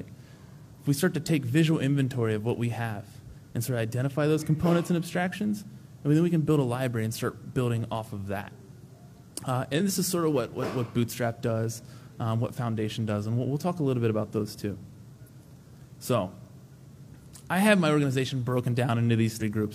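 Damaged data in the compressed stream, at 0.28, 7.48, 9.76 and 19.37 s, makes the decoder misread frames, lose sync and hunt for the next frame header. Each event lasts about 50 to 60 ms and is heard as a chirp, squawk, click or short hole in the sound.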